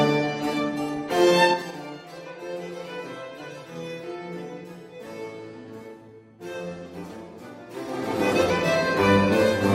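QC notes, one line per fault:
1.45–1.79 s, zipper noise: the level drops by roughly 15 dB in coarse 4 dB steps, around ten per second, with no smoothing between them, so each jump leaves a small click and the drop ticks downward rather than gliding. Unlike random crackle, these clicks are evenly spaced and occur only while the level is moving.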